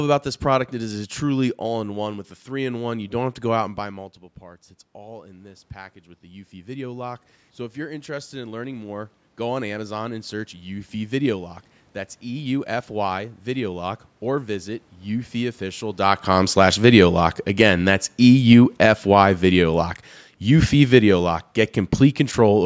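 From 3.76 to 15.96 s, automatic gain rising: after the talker drops about 16 dB around 3.5 s, the control slowly adds about 14 dB, lifting voice and room noise together. From 16.29 to 22.61 s, automatic gain falling: the talker comes closer near 16 s, so the control eases gain down about 8 dB, and speech and background sink in unison.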